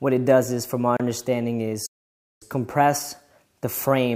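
Just before the one-second mark, from 0.97 to 1.00 s, there's a gap at a join of encoded pieces: a silence of about 29 ms cutting straight through continuous sound, with smeared edges, after which the audio picks up exactly where it left off. It's what you get when pieces, here apparently 4 s long, are encoded separately and stuck together untrimmed, so the encoder's start-up delay and end padding both stay in.

Then from 1.86 to 2.43 s the sound drops out mid-flow for roughly 550 ms before carrying on. That's a playback stall, most likely the player running short of data or having its thread blocked, leaving the output silent until it caught up again. It's long enough to register as a clear hiccup rather than a tick.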